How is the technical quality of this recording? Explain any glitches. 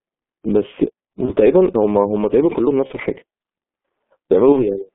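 Technical quality is poor: the speech is narrowband and heavily coded, with three brief dropouts that have been smoothed over. Throughout, the G.723.1 codec leaves the speech muffled and hoarse within roughly 200 Hz to 3.5 kHz, consistent with about 6.3 kbit/s. The smeared consonants, not just a narrow band, set it apart from a plain telephone filter. At 1.25–1.33 s, 2.87–2.92 s and 4.52–4.64 s, VoIP packet loss concealed by the speech codec covers about 30 ms each time. The decoder stretches the last sound into a fading buzz or coloured noise, then takes a moment to recover, instead of leaving silent gaps.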